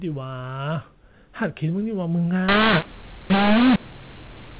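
From 2.49 s to the end, the speech turns harsh and gritty, the signature of mu-law and A-law mixed up: telephone audio coded with A-law is being decoded as mu-law. Because the two logarithmic curves assign different levels to the same 8-bit codes, sample magnitudes come out scrambled, some too loud and others too soft, and near-silent samples are lifted into an audible noise floor that fills the gaps. Before 2.49 s, the G.711 coding sounds as expected, with nothing above 4 kHz.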